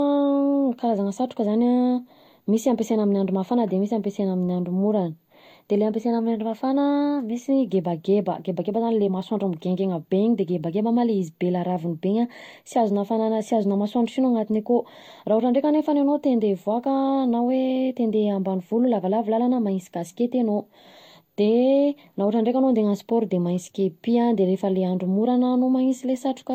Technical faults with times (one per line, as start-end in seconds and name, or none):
0.00-26.54 transcoding between lossy codecs